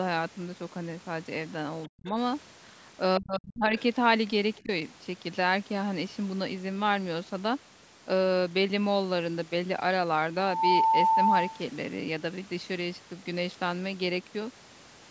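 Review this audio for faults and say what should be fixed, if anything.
Speech suppressed in double talk shows up three times: 1.88 to 2.16 s, 3.18 to 3.74 s, and a short one at 4.63 to 4.69 s. The first two drop hard, roughly 40 dB at their deepest, while the third is a milder dip of about 15 dB. The likely cause is the echo canceller getting confused while both ends talk, so it clamps down on the near talker along with the echo. Tuning the double-talk detector so it holds off suppression when near-end speech is present would fix it.

There's also a brief scrap of the other side's voice leaking through at 3.77 to 3.82 s, right after that second dropout. It's faint, about 25 dB under the talker. The likely cause is loudspeaker sound reaching the mic and the echo canceller not fully removing that leftover, which fits with it having just struggled through the double talk. Better echo cancellation, or a headset, would keep the far end off the mic.

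At 10.37 s a loudspeaker feedback squeal starts, an 890 Hz tone that swells over roughly a third of a second to about 5 dB above the speech and holds until 11.66 s. The mic is picking up the speaker it feeds, and at that one frequency the loop gain goes past one, so the tone keeps feeding itself. Lowering playback gain, moving the mic away from the speaker, or adding a notch or feedback suppressor near 890 Hz would stop it.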